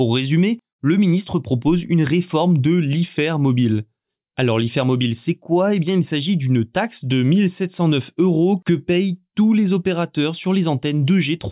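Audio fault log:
No faults are audible in this speech recording. Nothing in it calls for an entry in the log.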